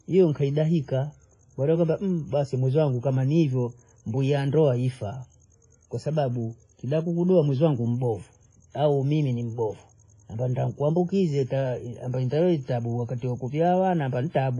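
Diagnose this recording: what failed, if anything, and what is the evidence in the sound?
Codec stage: the speech carries heavy WMA compression throughout, with ringing, washy smearing and a hiss that swells with each phrase. A spectrogram shows a hard ceiling near 10.6 kHz and patchy, blurred bands where weak components were zeroed, which fits a low bitrate around 24 kbps, likely from an early WMA encoder.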